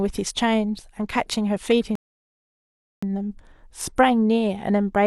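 At 1.95 s the speech stops dead for about 1.07 s, a rebuffering stall. The player ran out of downloaded audio and waited. Speech resumes at 3.03 s exactly where it paused.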